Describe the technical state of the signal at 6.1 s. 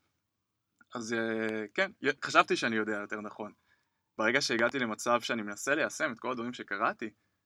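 Nothing is wrong at 6.1 s: the signal there is intact, with no dropout, clipping, glitch or other fault to be heard.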